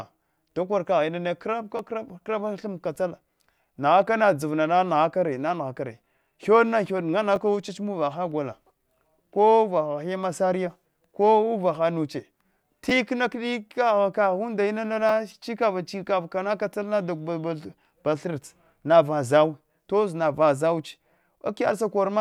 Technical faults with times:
1.77-1.79 repeated buffer
7.36 repeated buffer
12.90 repeated buffer
15.09 repeated buffer

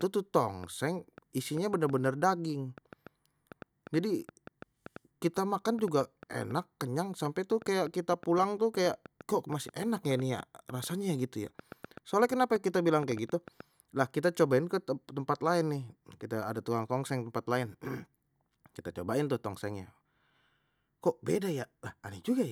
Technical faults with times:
0.01-13.61 train of clicks

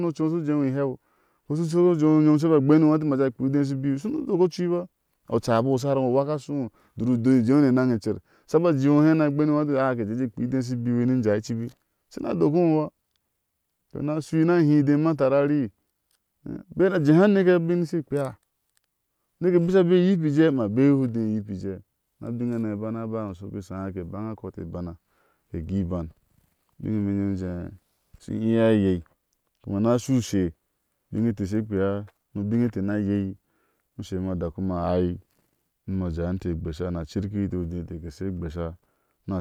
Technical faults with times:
none

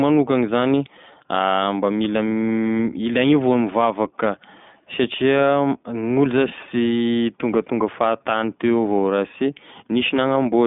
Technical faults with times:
0.00-10.66 iLBC codec

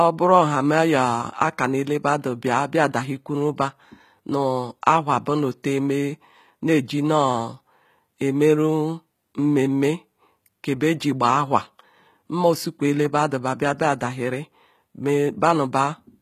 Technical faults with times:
0.00-16.22 HE-AAC compression

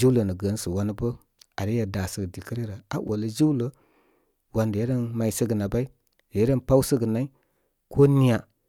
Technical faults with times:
3.05-3.09 damaged data in a compressed stream

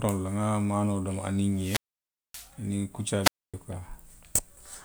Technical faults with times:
1.50-2.54 wireless microphone squelch dropout
3.22-3.55 wireless microphone squelch dropout

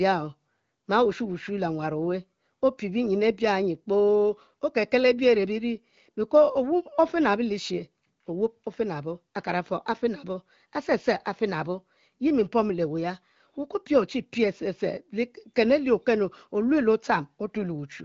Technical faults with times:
none

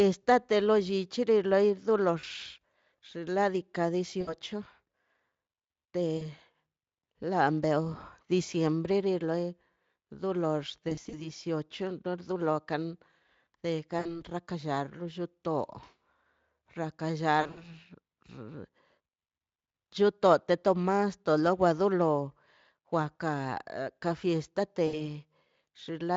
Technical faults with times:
2.19-2.26 VoIP packet loss concealed by the speech codec
4.21-4.35 VoIP packet loss concealed by the speech codec
6.17-6.25 VoIP packet loss concealed by the speech codec
10.89-11.31 VoIP packet loss concealed by the speech codec
13.99-14.23 VoIP packet loss concealed by the speech codec
17.41-17.64 VoIP packet loss concealed by the speech codec
24.87-25.01 VoIP packet loss concealed by the speech codec

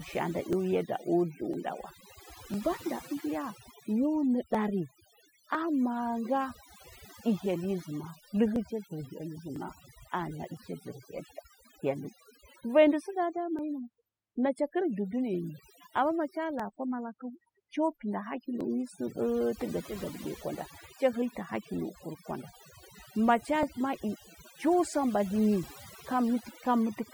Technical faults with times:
0.00-27.14 overdone noise removal
0.53-26.64 clock drift buffer slips

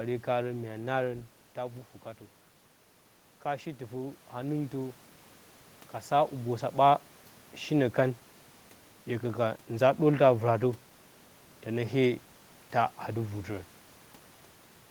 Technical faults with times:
3.44-5.01 automatic gain rising

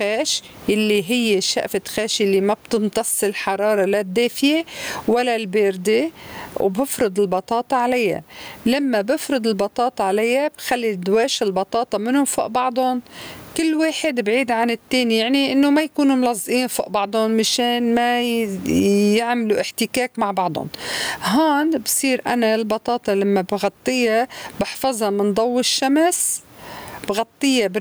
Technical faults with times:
0.00-27.81 gain pumping

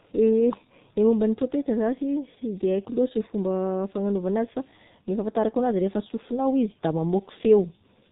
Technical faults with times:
0.00-8.11 G.723.1 codec

